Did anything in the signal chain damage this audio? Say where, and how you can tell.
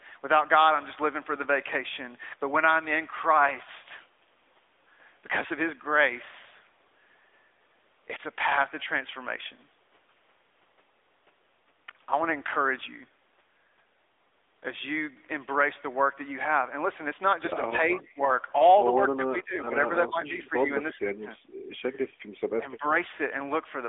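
Yes. The AMR narrowband mobile codec affects the whole clip at the codec stage. Nothing above 3.7 kHz survives, the speech sits in a 300 Hz to 3.6 kHz line band, and the buzzy, synthetic texture fits a mid-rate mode near 10.2 kbps, where the pulse-excited vocal-tract model audibly simplifies the voice.

Speech suppressed in double talk, a call-processing fault, appears at 17.78–18.19, 19.17–19.74, 20.08–20.7 and 22.58–22.84 s. The speech sinks by about 10 dB, and by about 15 dB at 19.17 s, for a few hundred milliseconds each time. The likely cause is an echo canceller mistaking the talker for loudspeaker echo.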